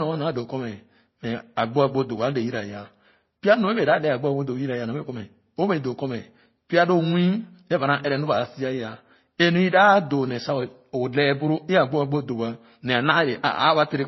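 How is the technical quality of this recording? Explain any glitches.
The technical quality is poor. The speech is muffled and damaged by compression from start to finish.

Throughout, the clip shows signs of transcoding between lossy codecs. Its mix of artefacts most likely comes from a low-bitrate MP3 (around 26 kbit/s) re-encoded to Vorbis (around 25 kbit/s). The second codec wasted bits re-encoding the first one's errors and added its own. The result is dull speech, with the artefacts of both codecs heard together and nothing above 5.8 kHz. On a spectrogram this appears as a flat ceiling at 5.8 kHz with blotchy, patchy energy below it.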